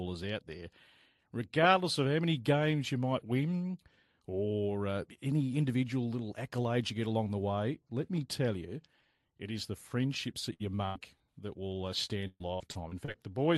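The audio comes through a call path that sounds like Opus, cut off around 12 kHz, which fits roughly a 40 kbps stream. There are two bursts of packet loss, at 10.53 to 10.62 s and 10.86 to 10.97 s. The receiver stretches the last sound into a fading buzz or hiss, then jumps ahead with about 60 ms and 100 ms gone. Between those bursts, at 10.76 to 10.80 s, there's a short concealed packet loss: about 20 ms went missing and got patched, so you hear a quick smear or wobble. From 12.05 to 13.16 s it turns into repeated packet loss with a robotic sound. Seven separate holes, the longest 127 ms, get patched back to back, covering about 28% of that stretch, so it comes out choppy with bits missing.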